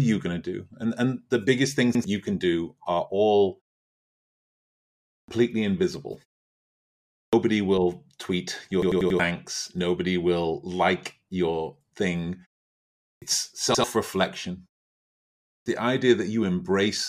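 Right at 1.95 to 2.04 s there's a repeated buffer: fresh audio didn't reach the device in time, so it replayed the last chunk, about 93 ms long, which fits a 4096-sample buffer. You hear that slice twice with a hard seam, a quick stutter, and roughly a tenth of a second of real speech never gets played. At 5.14 s the first of four clipped starts after a pause shows up. After 1.61 s of quiet, the output had dozed off and needed time to wake, so the first 143 ms of the next speech is gone and it lurches in mid-sound. At 7.19 s, after about a second of silence, the same wake-up delay eats 138 ms. From 8.82 to 9.20 s the buffer problem gets worse: a 93 ms chunk is played four extra times, a stutter, and about 0.4 s of speech is lost. At 13.07 s, after only 0.69 s of pause, 148 ms is chopped off the start again. At 13.75 to 13.84 s there's another single repeat of the 93 ms buffer, a brief stammer with about a tenth of a second of speech missing. 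Finally, at 15.52 s, after 0.91 s of quiet, the speech comes back missing its first 140 ms, so it starts abruptly.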